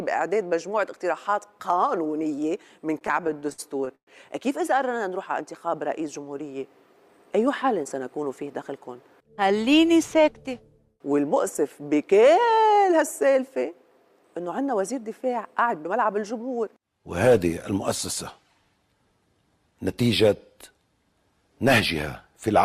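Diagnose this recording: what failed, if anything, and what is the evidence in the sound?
Between 2.99 and 4.09 s the sound hitches and drags, catching on itself fourteen times, the longest hold lasting about 119 ms and the last sound smeared and faded during the longer ones. These are repeated stalls (stutter) at the network and jitter-buffer stage. Packets arrived late, so the buffer kept running dry and the receiver stretched what it had, about 309 ms in total, some 28% of that stretch. Nothing is actually lost; it is simply delayed.

Twice the sound briefly rushes forward without any change in pitch: from 7.08 to 7.70 s at roughly 108% speed, and from 19.33 to 19.89 s at roughly 109%. This is jitter buffer speed-up, again at the network and buffer stage. After late packets arrived in a bunch, the buffer held more than its target. To bring the delay back down, the receiver trimmed many tiny pitch-period slices, about 50 ms in each burst, which gives the sound a hurried feel.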